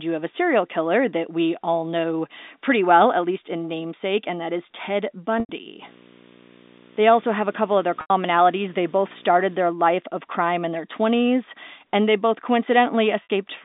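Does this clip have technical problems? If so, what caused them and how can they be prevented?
Yes. Packet loss with pitch repetition occurs at 5.40, 8.01 and 13.23 s, with gaps of 90, 90 and 60 ms, which fits two or three lost packets each. The receiver repeats the last pitch period, giving a brief buzzy hold that fades toward silence before the speech cross-fades back in. On a waveform it shows as a run of identical cycles shrinking in amplitude. On a spectrogram it shows as frozen, evenly spaced harmonics that fade out. Prevention: use a jitter buffer with forward error correction or redundancy, or a more reliable network path.

Video or display buzz runs from 5.82 to 9.56 s, ending just before "their life of crime". A screen or video cable couples its 60 Hz field rate into the audio at about 20 dB below the signal, and hash sits on top of it. A spectrogram shows a steady 60 Hz line with harmonics and a broadband haze above it. 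Prevention: separate and shield the audio and video cables, and use balanced connections or a ground-loop isolator.

The G.711 A-law telephone coding limits the band to roughly 200 Hz to 3.7 kHz, which is normal for that format.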